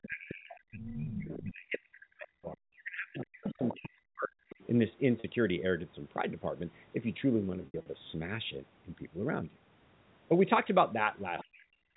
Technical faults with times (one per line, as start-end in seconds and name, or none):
0.02-0.95 other side's voice leaking through
0.07-4.33 speech suppressed in double talk
1.36-1.42 other side's voice leaking through
3.19-3.79 other side's voice leaking through
4.50-4.67 other side's voice leaking through
5.20-5.24 packet loss with pitch repetition
7.62-7.86 packet loss with pitch repetition
11.39-11.44 other side's voice leaking through
11.44-11.96 speech suppressed in double talk